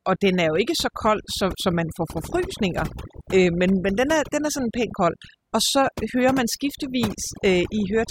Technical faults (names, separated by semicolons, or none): overdone noise removal